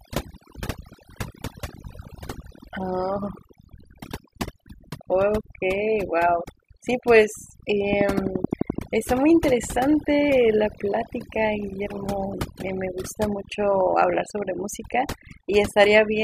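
Overdone noise removal runs through the whole recording: a noise reduction stage set far too strong pulls individual frequency bands down or out whenever they sit near its noise estimate. The background drops and breaks up into twinkling specks, while quieter parts of the speech vanish.

From 7.93 to 8.79 s a train of clicks appears, likely from interference or a faulty connection injecting pulses. About ten near-identical clicks arrive at a steady 11.7 per second, roughly 15 dB above the speech, heard as sharp regular ticking.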